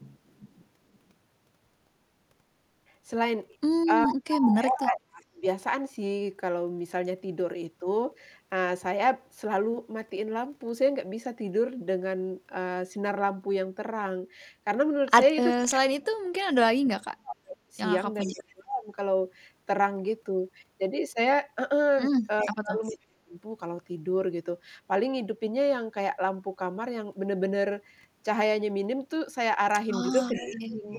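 A far-end echo canceller likely failed to remove its loudspeaker's sound, so this speech clip has echo leak: a copy of the talker returns about 411 ms late at 0.0–0.99, 4.06–4.15, 17.31–18.41, 22.39–22.93 and 30.12–30.99 s. It ranges from faint to nearly as loud as the speech, strongest around 4.1 s. The same canceller likely also produces speech suppressed in double talk when both sides overlap, pulling the talker down by about 35 to 40 dB at its deepest, at 4.08–5.44, 15.56–18.88, 22.46–23.36 and 30.37–30.89 s, so the voice dips or drops out in pieces.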